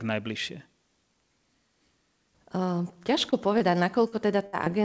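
A speech recording carried over a call link, with no energy above 8 kHz, which fits a G.722 codec at 64 kbps. Short concealed packet loss occurs at 3.30 to 3.34 s, 3.58 to 3.62 s, 4.08 to 4.14 s and 4.65 to 4.68 s. About 20 to 40 ms of audio never arrived each time. The receiver extended the preceding sound to cover it, leaving brief smears or wobbles. A burst of packet loss follows at 4.46 to 4.55 s. About 60 ms went missing, and the fill fades as a held buzz or hiss before the sound resumes further on.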